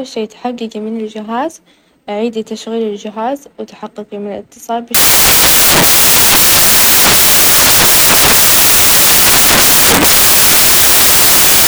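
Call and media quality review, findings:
Samples built from the wrong bytes, 4.95 s to end of clip (11.67 s). Loud, harsh broadband noise, close to white on loud passages. Probable component: PCM decoder or byte reader. Mechanism: byte offset, swapped order or wrong alignment, so low-order bits land in the high byte. Fault persists once triggered.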